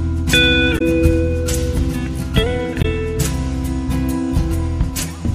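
A short audio clip with damaged data in a compressed stream at two points, 0.75 to 0.82 s and 2.78 to 2.85 s. Each time, corrupted bytes reach the decoder, which misreads the affected frames, loses sync and hunts for the next valid frame header. For about 70 ms each, that breaks through as a brief chirp, squawk, click or short hole, an abrupt disruption that doesn't belong to the surrounding sound.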